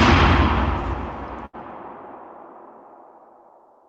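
A burst of packet loss hits this recording of sounds from 1.45 to 1.55 s. Packets holding about 80 ms of audio never arrived in time to be played, so the receiver filled the hole by stretching the last sound it had and letting it fade as the gap went on. When normal playback resumes, that stretch of the original audio is simply gone, leaving a brief smeared, dying tail followed by an abrupt jump forward.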